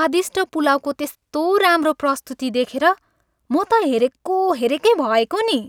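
No technical faults can be heard anywhere in this speech recording. There is nothing to place on a timeline or to trace back to a cause.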